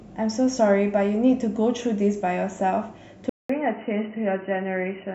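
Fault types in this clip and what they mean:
Input switched to a poorer device: at 3.29 s the speech drops out for about 200 ms, then comes back duller and a bit quieter, cut off above 3 kHz, with a faint new background noise underneath, likely the recording jumping to a narrower-band microphone or headset.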